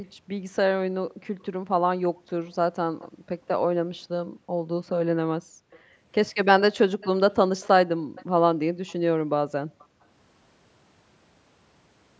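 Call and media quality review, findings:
Background gated by the echo canceller: room tone dips by about 40 dB within 0.08–5.92 s (about 2 s in total), 7.98–8.15 s and 9.18–10.04 s, seen as near-silent gaps in the waveform noise floor.

Echo leak: faint copy of the speech about 320 ms late at 1.39–1.45 s, 2.46–3.07 s, 5.71–5.79 s and 7.01–9.85 s, strongest in the last. On the spectrogram it shows as a weak, shifted duplicate of the harmonics, likely from the far-end echo canceller letting loudspeaker pickup through.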